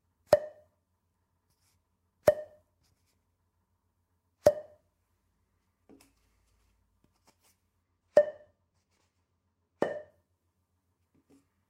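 From 7.83 s to 10.1 s the audio shows channel delay with comb filtering. One channel runs a couple of samples late, a tiny fraction of a millisecond, and when the two are folded to mono the shared content cancels at evenly spaced frequencies, the first notch landing around 10 kHz. The top end turns dull. Unlike a flanger, the notches stay fixed rather than sweeping, and unlike plain low-pass filtering, the loss comes from a notch, not a steady roll-off.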